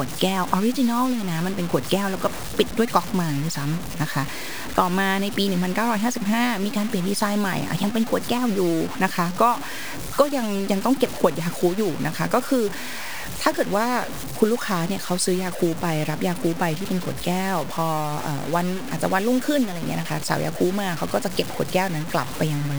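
From start to finish the speech carries a grainy, buzzing distortion that rises and falls with the voice, most likely low bit depth without dither. Resolution of around 5 bits with truncation leaves an error only about 15 dB below the signal, so quiet syllables turn gritty and decaying tails sputter before dropping to silence. Unlike steady hiss, this grit follows the signal and vanishes in the pauses.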